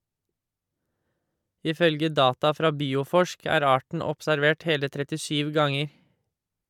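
No technical faults are audible.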